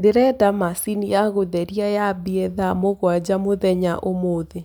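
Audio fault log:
No technical faults can be heard anywhere in this speech signal.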